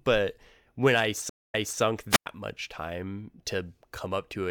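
Right after "when I", from 1.29 to 1.81 s, the speech drops into about 224 ms of silence, then picks up again roughly 287 ms earlier than where it stopped, repeating a short stretch. This is a stream reconnect: the connection broke, the player restarted its decoder, and the server resent audio.

Between 2.10 and 2.26 s, just before "much time", hiss briefly swells and the signal falls into a hole of near silence lasting about 101 ms. This is a wireless microphone squelch dropout: the FM radio link faded until the receiver's squelch muted its output.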